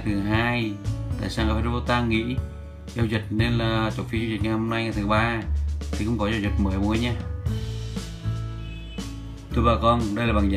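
No technical faults can be heard anywhere in the audio.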